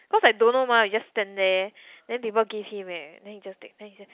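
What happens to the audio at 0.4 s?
Nothing goes wrong at 0.4 s: the speech continues intact through the ordinary G.711 telephone coding, with its usual 4 kHz upper limit.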